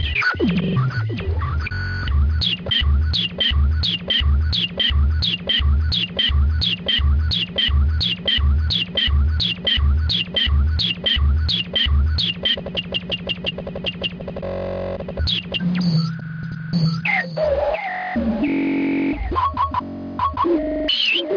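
No technical faults are audible.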